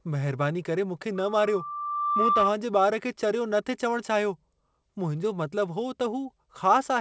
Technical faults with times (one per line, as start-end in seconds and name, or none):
1.15-2.53 loudspeaker feedback squeal